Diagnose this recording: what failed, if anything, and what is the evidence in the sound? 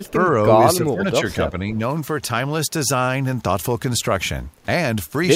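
Echo leak, 0.04 to 0.12 s: a faint delayed copy, about 35 dB down and 272 ms late, likely a far-end echo canceller letting loudspeaker pickup through in call processing.

Speech suppressed in double talk at 0.12 to 0.35, 0.77 to 1.24 and 1.49 to 1.74 s: the speech dips by up to roughly 15 dB, likely from call-processing suppression while both sides talked.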